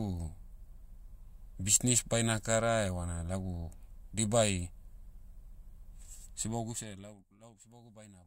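From 6.47 to 7.32 s the speech drops by roughly 25 dB, and a fine, rapid ticking rides on it while the level falls, a buzzy zipping texture at about fifty clicks a second. This is zipper noise: the gain is moved in small discrete jumps rather than a continuous ramp, so each jump puts a tiny discontinuity in the waveform.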